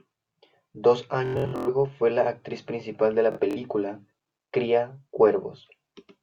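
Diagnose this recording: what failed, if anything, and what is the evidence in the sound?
The wireless Bluetooth link lost or delayed packets, so the receiver replayed its last short buffer slice. This Bluetooth stutter buzzes from 1.26 to 1.69 s, before "fue la actriz principal", and from 3.32 to 3.57 s, after "la actriz principal de". Speech then resumes further on.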